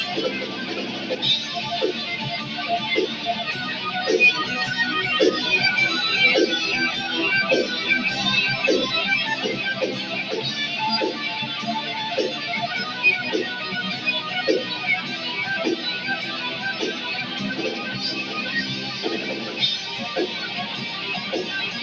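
Call-processed audio, band-limited to nothing above 8 kHz, with sound cut by the noise suppressor from 0.91 to 1.15 s. The suppressor mistook that stretch for noise and pulled it down by about 4 dB at most, so for around a fifth of a second the sound dips.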